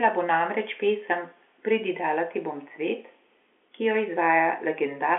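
No technical faults can be heard in this speech.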